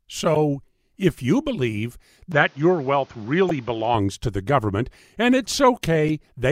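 Damaged data in a compressed stream first appears at 0.34 to 0.37 s as a brief glitch. Corrupted bytes in the encoded speech make the decoder misread those frames, lose sync and search for the next valid frame header, so a small stretch of sound is garbled.

Input switched to a poorer device is the likely cause of what follows, from 2.32 s, just after "if you believe", to 3.95 s, just before "to the government and". Nothing above 7 kHz remains, so the speech turns dull and boxy. A new noise floor sits about 30 dB below the signal. There is no gap at the switch and no change in level, so the change is in tone and background alone.

Damaged data in a compressed stream strikes again at 3.49 to 3.51 s, inside the narrowed section, and once more at 6.09 s. Each is a short blip where the decoder drops corrupted frames and resyncs.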